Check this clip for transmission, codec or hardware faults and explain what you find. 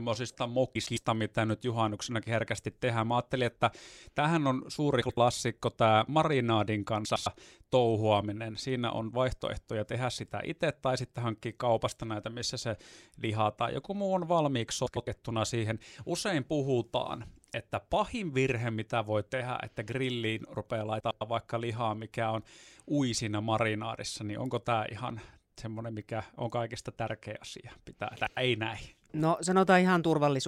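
The speech has one recurring transmission fault: frames out of order, at 0.75–0.97 s, 5.01–5.17 s (after "että tähän on suuri"), 7.05–7.27 s, 14.86–15.08 s (after "joku muu on valmiiksi"), 21.00–21.21 s and 28.15–28.37 s (before "ei näin"). Each time, two adjacent blocks of about 105 ms (about 78 ms at 5.01 s) play in swapped order, giving a garbled flutter but no lost time.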